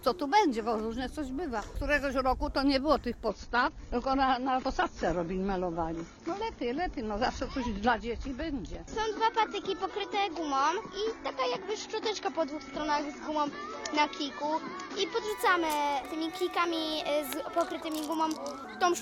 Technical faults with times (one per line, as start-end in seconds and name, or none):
3.28-15.28 adaptive stream at a lower bitrate